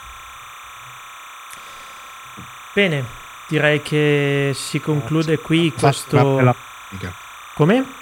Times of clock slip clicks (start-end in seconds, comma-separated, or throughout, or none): none